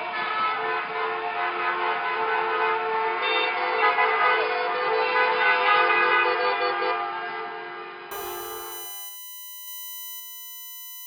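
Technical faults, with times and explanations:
Throughout: USB whine. A fixed-pitch whine runs under the whole clip. Its series is built on 1 kHz, the rate of the USB bus's 1 ms frames. The strongest component sits high, at 14 kHz, so it reads as a thin, piercing tone. It is roughly 20 dB below the wanted sound. The bus pulls current in a steady rhythm each frame. That ripple leaks through the power or ground path into the audio.
0.0 to 8.11 s: input switched to a poorer device. For this stretch the sound is band-limited, with nothing above 5 kHz. It sounds dull and boxy. It is also about 10 dB quieter and carries its own background noise, roughly 30 dB below the signal. At 8.11 s the full bandwidth returns with no gap. This is likely the system moving from a narrower, noisier input to a better one mid-recording.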